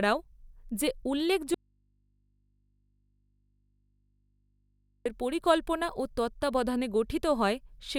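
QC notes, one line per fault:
1.54–5.06 s, audio dropout to a faint residue: the speech cuts off abruptly for about 3.5 s, leaving only mains hum roughly 45 dB below the signal, likely from an input left open. On the waveform it is a near-flat gap; the spectrogram shows only thin hum lines.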